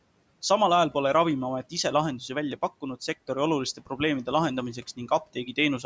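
Between 3.77 and 4.0 s there's a spot of speech cut by the noise suppressor. The suppressor mistook a stretch of the talker for background and pulled it down with the room noise, which sits about 24 dB under the speech. The deepest dip is about 11 dB, and only about a tenth of a second is hit in total, so the sound goes briefly faint and swallowed. The band tops out at 8 kHz, as call microphone processing does.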